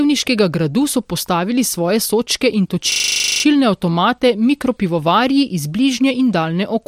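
From 2.92 to 3.44 s the speech locks into a rapid, rattling 25 Hz buzz, one 40 ms sliver repeated exactly 13 times. This is a system hang loop: the computer or driver froze while the sound hardware kept replaying the same buffer.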